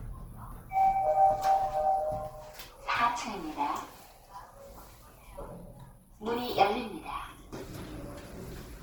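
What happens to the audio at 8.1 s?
At 8.1 s, as across the whole clip, the sound is grainy and rough, likely from Opus compression at a low rate near 16 kbps. Band energies are kept, but fine detail is refilled with folded or noisy content, so a spectrogram shows noise-textured bands with few holes, reaching about 20.2 kHz.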